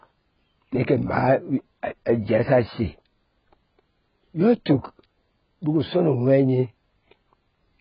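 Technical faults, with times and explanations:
Throughout: AAC compression. Nothing is heard above about 5.1 kHz, so the speech sounds dull and boxed in. Sibilants turn fizzy and smeared, and sustained vowels warble. The likely cause is heavy AAC-LC coding at a very low bitrate, which fits about 12 kbps. With so few bits, the encoder lowers its cut-off and quantises each frame's frequency lines coarsely. It leaves gaps or fills bands with substitute noise, and that gives the watery texture.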